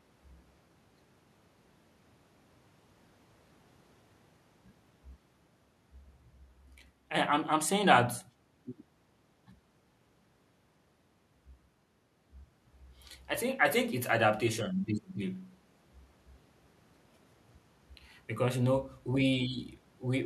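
No technical faults occur in the speech at any point, so there is nothing to describe in time order.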